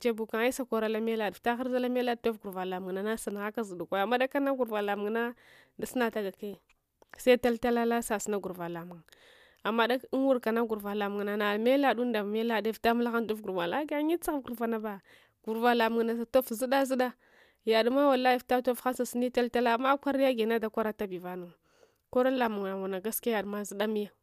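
A speech recording with nothing technically wrong with it.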